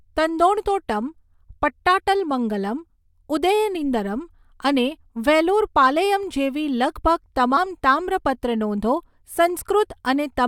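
A speech clip with compressed frames skipped: around 7.56 s a couple of compressed frames go unplayed, so about 40 ms of speech vanishes and the audio jumps ahead.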